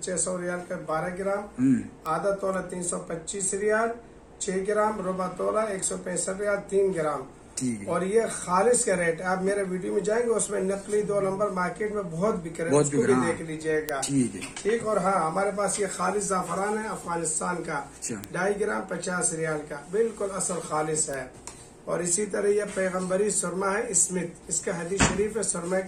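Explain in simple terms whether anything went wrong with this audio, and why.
Bit error spikes occur at 2.06, 13.89, 18.24 and 21.14 seconds, each a single sharp tick. A single stored digital value got corrupted, so one sample briefly jumped far off and snapped back. The loudest tick is at 13.89 seconds.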